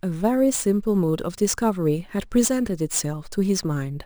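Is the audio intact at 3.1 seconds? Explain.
No. At 3.1 seconds there is crude rate conversion, present across the whole clip. Samples were repeated to raise the rate, which fits a 32 kHz to 44.1 kHz conversion. The error sits around 20 dB down and adds a gritty, inharmonic fizz on louder, brighter speech.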